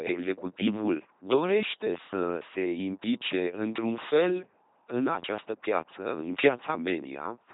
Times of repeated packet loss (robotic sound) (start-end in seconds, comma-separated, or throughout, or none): none